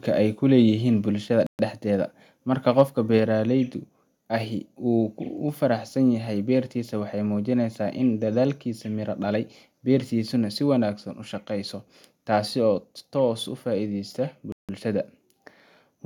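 At 1.02 s the speech and its background drop together by about 2 dB in a single step, with no fade. The likely cause is a microphone volume step-down: the call software judged the input too hot and cut the device's input volume at once. Because the drop is small, it registers as a slight, sudden loss of presence rather than a jump, and everything after it sits marginally lower.

From 1.47 to 1.59 s the audio cuts to 125 ms of silence and then resumes. The likely cause is a Bluetooth stall: interference held up packets to the headphones, their buffer emptied, and playback waited for the resent data. The gap is abrupt on both sides, with nothing audible bridging it.

Between 2.79 and 2.82 s a peak overshoots the converter's ceiling by about 1 dB, with a small share of samples flattened at the top, around a couple of percent. This is likely microphone overload, from an input volume set high enough that the loudest moment runs out of headroom. 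Its squared-off tops give that syllable a brief harsh, crackly edge.

From 14.52 to 14.69 s a second Bluetooth stall cuts the speech to silence again, this time for 164 ms, before playback picks back up.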